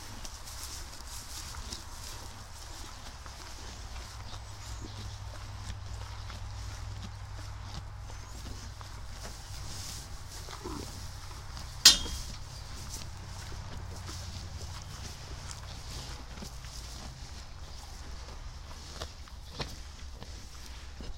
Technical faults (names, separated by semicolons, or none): periodic USB or driver dropouts